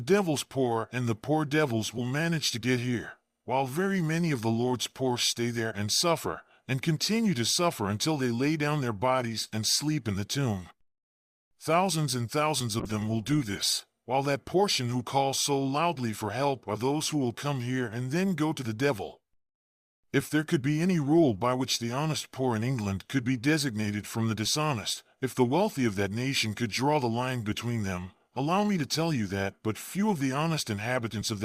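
From 12.8 to 14.01 s a call bitrate drop makes the audio rough and muffled, consistent with roughly 96 falling to 20 kbps; the spectrogram loses its upper band.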